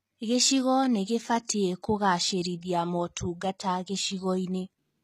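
Throughout the speech, s sounds come out gritty and lispy, with plainly audible damage. The likely cause is HE-AAC compression, which rebuilds the treble from copied lower bands and fits a bitrate near 20 kbps. A spectrogram would show repetitive, blocky high-band texture cut off sharply at 14.9 kHz.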